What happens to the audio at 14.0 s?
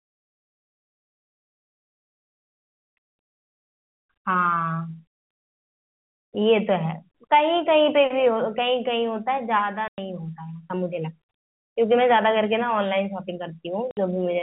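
A short hole cuts into the speech just before 14.0 s: from 13.91 to 13.97 s the sound drops to dead silence for 60 ms, with hard edges where it stops and restarts. That is packet loss filled with silence. A run of packets never arrived, and the receiver played nothing in their place. A 60 ms gap fits six lost packets of 10 ms each. The narrow telephone band of the G.711 coding carries on unchanged on either side of the gap.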